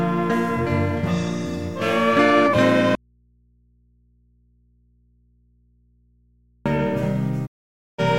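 From 2.95 to 6.66 s the sound drops out to a faint residue for 3.7 s, leaving mains hum about 40 dB down rather than silence. The abrupt cut with a live, humming path likely points to a lost signal on an open input. From 7.45 to 8.00 s a digital broadcast dropout mutes the sound completely for 0.51 s after a 20 ms fade, which fits roughly 16 frames failing at the receiver. The clean mute, with no hum underneath, sets it apart from the earlier break.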